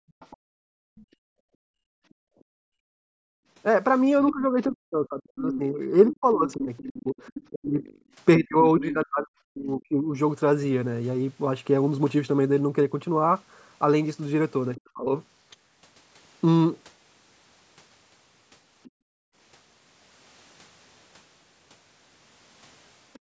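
Right from the start, 0 to 3.46 s, the background is gated by the echo canceller. The room sound gets pulled down by about 40 dB for roughly three seconds while the far end plays, then comes back.

Overlapping that, from 0.09 to 7.99 s, the other side's voice is leaking through. There's a faint second voice, around 15 dB under the talker, likely left over because the canceller didn't fully strip the loudspeaker pickup.

From 4.31 to 10.16 s the speech is suppressed in double talk. The talker dips hard, up to about 40 dB, in pieces totalling around four seconds. That's likely the canceller clamping down while both ends spoke at once.

The same pairing comes back briefly at 14.76 s. There's a tiny leak of the other side's voice, roughly 25 dB down and likely uncancelled echo, through 14.81 s. The talker is ducked in double talk until 15.09 s, which is likely the same clamping again.

From 18.83 to 18.9 s there's another faint scrap of leakage, quite far down and likely echo residue. 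The background then gets gated out from 18.9 to 19.35 s.

At 23.13 to 23.19 s a similar faint leak is likely residual echo. Gating of the background follows from 23.19 s to the very end.

Underneath it all, the call mic processing is cutting off everything above 8 kHz.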